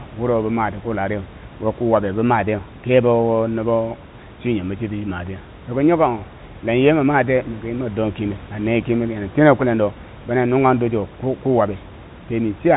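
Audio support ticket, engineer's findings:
Engineer's findings: no fault found in this audio.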